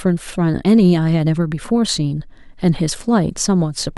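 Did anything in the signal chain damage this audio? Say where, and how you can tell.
No, nothing along the chain from capture to playback has audibly damaged this speech recording, and it reaches the listener technically intact.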